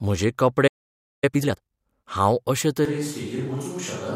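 At 0.67 s the speech stops dead mid-flow. Silence holds until 1.24 s, a gap of about 0.55 s. This is a playback stall. The player most likely ran dry of data, or its output thread was blocked.

From 1.24 s to 1.78 s the speech rushes. This is time-compressed catch-up. The player is clearing the backlog the stall left behind. It drops short slices and cross-fades the joins. Playback runs at about twice normal speed. The pitch stays where it was.

At 2.85 s the voice changes abruptly and stays changed to the end. It turns roomy and hollow. The low end thins out. The level falls by about 5 dB. Background room noise rises to roughly 30 dB under the speech. This is a switch to a distant microphone. The likely cause is that the close microphone's feed dropped out, leaving only a mic further away. The cut is instant, with no fade between the two sounds.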